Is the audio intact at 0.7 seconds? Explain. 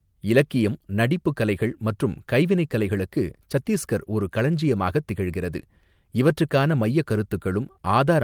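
Yes, the audio is intact at 0.7 seconds, with no dropout, click, distortion or other fault audible at that moment.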